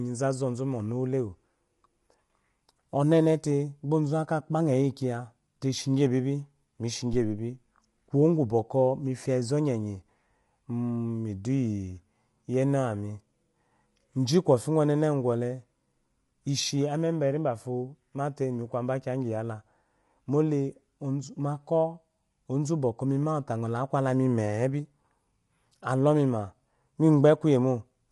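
The speech was likely squeezed through low-delay AAC compression at a low bitrate, around 32 kbps. Its short frames blur the pitch harmonics, so the voice sounds rough and grainy throughout, with nothing above 11.6 kHz. At 7.13 s, a supply switching on a live input pushes a voltage step through the coupling capacitors, producing a phantom power thump: a deep thud lasting until 7.50 s, decaying over about 83 ms, just before "kuwo gu".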